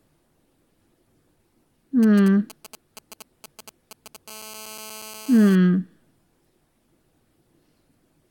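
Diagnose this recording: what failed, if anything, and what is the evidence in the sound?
GSM signalling bursts in the analogue wiring: from 2.03 to 4.17 s, galloping ticks and short 216.7 Hz buzzes, roughly 20 dB below the signal, come from a nearby phone's radio bursts rectified by the circuit.

GSM phone buzz, also analogue: from 4.28 to 5.56 s, a steady, raspy 216.7 Hz buzz with many harmonics, about 23 dB below the signal, comes from a phone transmitting in bursts 217 times a second during a call.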